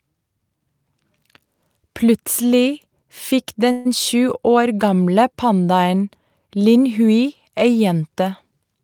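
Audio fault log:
3.71–3.87 s, call audio freeze: the sound stalls and the last bit is stretched into a fading buzz for about 137 ms, likely because packets got held up and the jitter buffer ran dry. Nothing's lost; it picks up where it stopped, just 137 ms later.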